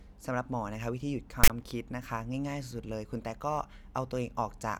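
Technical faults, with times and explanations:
1.44 to 1.50 s, file tags played as audio: for about 60 ms the speech gives way to a harsh, loud rasp with hard edges, leaning to one side of the waveform, then drops to dead silence before the speech picks up again. That's a block of text tags being read as if it were sample data. The character bytes sit in a narrow range, so they come out as a lopsided buzz, and the zero padding after them plays back as nothing at all.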